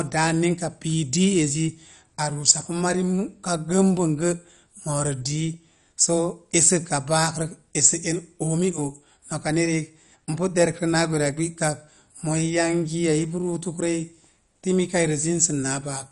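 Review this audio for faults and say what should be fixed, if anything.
MP2 compression, throughout the speech: nothing survives above 11.3 kHz, and the remaining bands flicker with a gurgling, granular roughness. This is likely MPEG Layer II starved of bits, switching off upper sub-bands and coarsely quantising the rest, which fits roughly 48 kbps. Encode at a higher bitrate or keep an uncompressed master.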